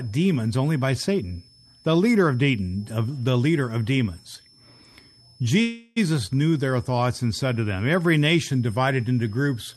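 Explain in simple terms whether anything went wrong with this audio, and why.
Two things went wrong. Throughout the speech there is a switching supply whistle, a faint high tone near 5 kHz that wanders slightly between about 5.18 and 5.33 kHz. It comes from a power supply running in an audible mode, and its pitch shifts as the load changes.

From 5.61 to 5.98 s there is a call audio freeze. The sound stalls and is replaced by a fading buzz or hiss for about 0.35 s, then carries on where it stopped, so nothing is lost but everything after arrives later. The likely cause is that network packets were delayed and the receiver's buffer ran empty.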